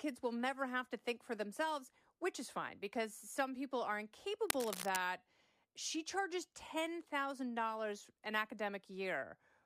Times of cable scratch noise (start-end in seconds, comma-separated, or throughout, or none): 4.48-4.99